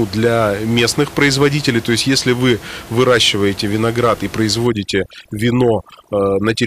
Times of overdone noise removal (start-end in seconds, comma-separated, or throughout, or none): 4.67-6.67